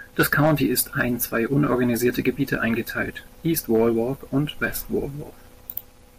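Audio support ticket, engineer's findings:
Hard clipping on speech peaks, 0.20–1.64 s (about 7 dB over, harsh fuzz), 2.06–2.55 s and 3.74–3.88 s (about 3 and 2 dB, crackle). Input gain too hot, flattening tops.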